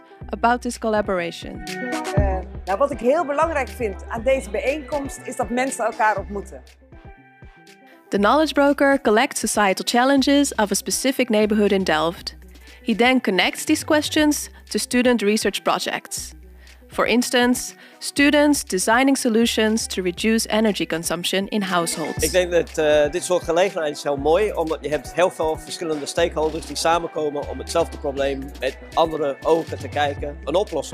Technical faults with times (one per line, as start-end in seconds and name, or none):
3.60-30.94 sample clock jitter